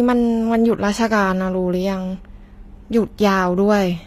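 The speech was likely coded with HE-AAC compression at a low bitrate, fitting about 24 kbps. Only the lower spectrum is truly coded, and the treble is rebuilt from copied bands. Throughout, s sounds turn gritty and metallic, and nothing reaches above 14.9 kHz.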